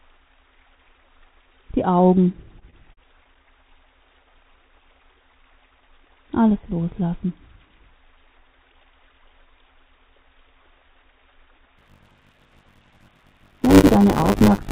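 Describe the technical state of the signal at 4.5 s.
At 4.5 s the signal is inside a jitter buffer slow-down running from 4.10 to 5.16 s. The receiver repeats single pitch periods to rebuild its reserve, adding 41 ms, so the sound plays at 96% speed, drawn out at unchanged pitch, band-limited to 4 kHz throughout, consistent with G.711 A-law.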